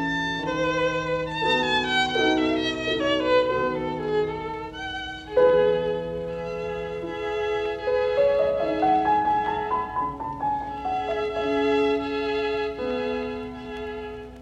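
No technical faults are audible anywhere in the recording.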